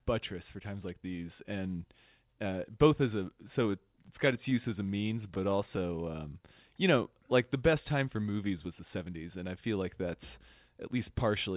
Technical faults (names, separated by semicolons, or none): scattered short gaps; jitter buffer slow-down; jitter buffer speed-up